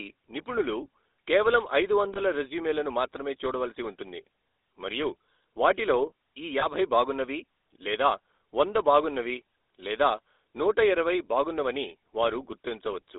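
From the start, the speech carries the GSM full-rate codec: its pulse-driven vocal-tract model thins the excitation into a buzzy, gravelly roughness, plainly audible throughout. A spectrogram shows energy confined to roughly 300 Hz to 3.7 kHz, which fits a telephone line band, with the codec in its 13 kbit/s full-rate mode.

At 2.14–2.19 s and again at 6.60–6.66 s come lost GSM frames. Each time, the decoder re-uses the last good frame, so the sound briefly freezes into a rough metallic ring. Each gap is consistent with a single missing 20 ms frame. On a spectrogram each shows as a short, smeared, repeated spectral slice.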